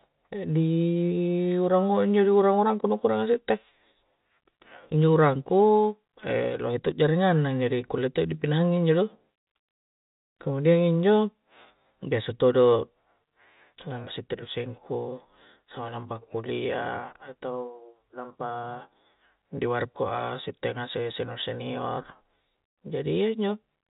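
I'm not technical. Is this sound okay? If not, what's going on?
Yes, nothing is wrong with this speech recording, which simply carries the narrower sound of ordinary G.711 telephone coding, where nothing above about 4 kHz comes through.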